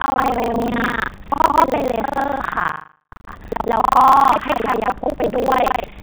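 Buffer tearing runs through the whole speech clip. A steady robotic rattle sits on the sound at 25 Hz. That rate fits a playback period of about 40 ms. The writing program and the reading hardware have drifted out of step and cross inside each period. About half of every buffer holds stale audio from roughly 150 ms earlier. Hard joins on each side of that stale part create the buzz. It appears only while sound is present. The phone-band G.711 path removes everything above 4 kHz.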